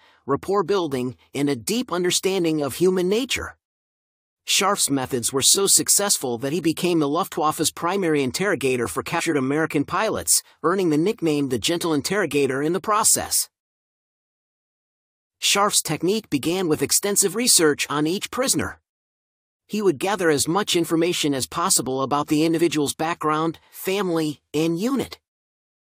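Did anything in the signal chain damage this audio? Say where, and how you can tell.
Yes. Compressed frames were skipped at the codec or storage stage, once from 9.18 to 9.20 s, just after "primary interrogator for", and once at 22.58 s, between "as possible about the" and "background family". At each point the speech jumps forward, losing about 70 ms and then about 50 ms, which fits whole frames of 23.2 ms, about three and then two.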